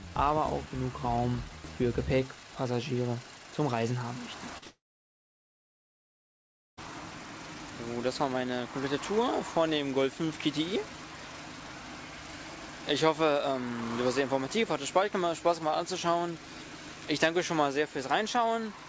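Call audio with a wideband ceiling at 8 kHz, consistent with a G.722 call path, breaks up at about 4.6 s. Two bursts of short concealed packet loss, at 4.58 to 4.64 s and 4.64 to 4.68 s, replace about 40 ms and 20 ms with continued sound. They appear on a spectrogram as a brief smeared, repeated-looking patch. From 4.68 s to 6.79 s the concealment fades into about 2 s of flat silence, likely a long network dropout. The waveform shows an empty band there, and the audio resumes at 6.79 s with that stretch gone.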